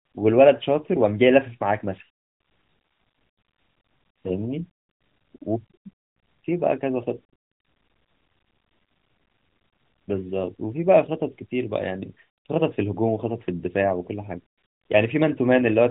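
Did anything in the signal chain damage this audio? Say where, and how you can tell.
No, nothing in the chain damaged this speech; the AMR narrowband mobile codec path is working as designed, with the band stopping near 3.8 kHz as that path should.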